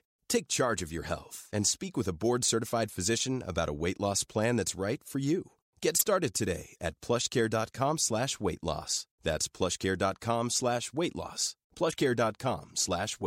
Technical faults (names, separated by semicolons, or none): damaged data in a compressed stream